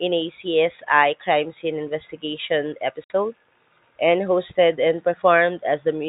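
Packet loss filled with silence cuts this speech recording at 3.04 to 3.10 s, just after "scene investigation": a 60 ms hole, consistent with three 20 ms packets going missing, where the receiver inserted silence, so the sound stops dead with hard edges. The narrow telephone band heard throughout comes from G.711 mu-law coding at 64 kbps.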